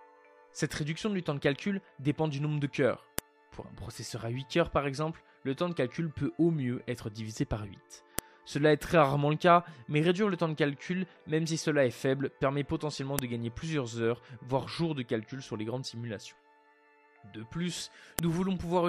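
Separately saved five-second pieces were joined without stripping their WAV headers, so each header's bytes play as samples: a file header played as audio. It sounds as a sharp, loud click at 3.19, 8.19, 13.19 and 18.19 seconds, regardless of the surrounding sound.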